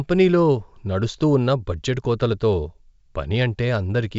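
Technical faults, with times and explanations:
Nothing stood out on listening to this speech, which has the band-limited sound of G.722 wideband telephone coding at 64 kbit/s, with nothing above about 7.7 kHz.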